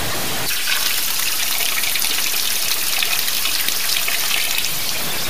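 The signal has likely been reduced to about 4 bits by plain truncation, with no dither, across the whole clip. That leaves only sixteen levels to describe the waveform, so the rounding error tracks the signal instead of spreading out as neutral hiss. The result is low bit depth without dither heard throughout: a harsh, grainy distortion sitting nearly as loud as the sound itself, changing character as the sound moves.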